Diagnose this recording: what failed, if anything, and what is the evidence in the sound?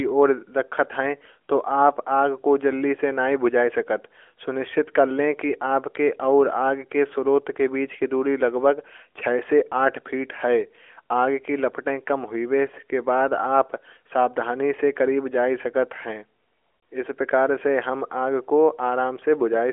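Nothing failed: the speech sits inside the 300 to 3400 Hz band of an AMR narrowband mobile codec path with only light coding texture, which fits its highest 12.2 kbps mode, and no stage from wiring through playback shows a fault.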